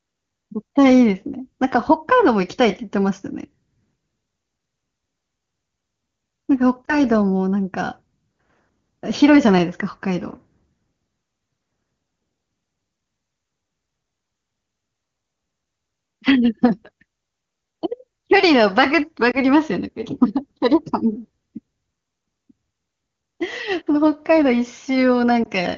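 Speech with three short warbling dips, at 6.86–6.98, 19.31–19.37 and 25.44–25.49 s. These are lost AMR speech frames, each fitting one missing 20 ms frame that the wideband decoder patched by reusing its previous settings.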